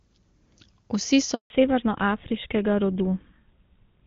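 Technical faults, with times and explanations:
1.34 to 1.50 s, handover gap: the speech fades out within a few tens of milliseconds and a dead silence of 160 ms follows. The call was passed between networks, and no speech frames arrived during the switch, so that stretch is simply missing.
1.50 s to end, fallback to narrowband: from here the speech sounds duller and rougher, with nothing above 4 kHz. The call dropped from clean HD Voice wideband coding to an older narrowband codec, consistent with GSM full rate, which cannot carry the upper band.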